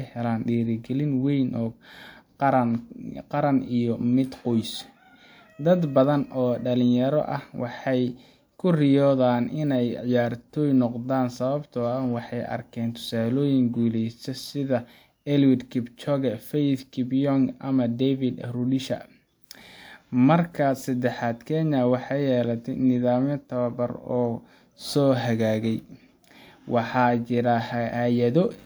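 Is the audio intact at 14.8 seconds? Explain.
Yes, the audio at 14.8 seconds is intact, with no audible fault at that moment.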